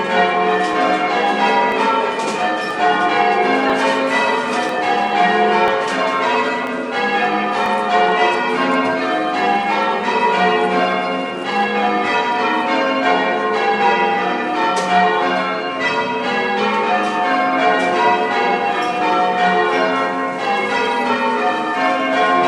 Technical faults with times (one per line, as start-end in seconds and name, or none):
0.73 overlap between stream segments
1.72 overlap between stream segments
2.71 overlap between stream segments
3.70 overlap between stream segments
4.69 overlap between stream segments
5.68 overlap between stream segments
6.67 overlap between stream segments
7.66 overlap between stream segments